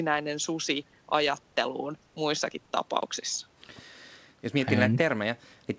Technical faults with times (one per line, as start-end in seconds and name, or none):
none